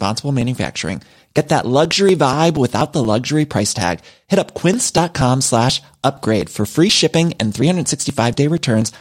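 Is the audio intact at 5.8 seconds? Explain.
No. At 5.8 seconds the speech is inside a run of periodic USB or driver dropouts lasting from 0.17 to 8.82 s. Every 0.24 s something stalls the audio path and roughly 10 ms is skipped, so the waveform jumps abruptly at each splice. You hear regular ticks while speech is present. A spectrogram shows thin vertical broadband lines evenly spaced across the whole span, about forty in total.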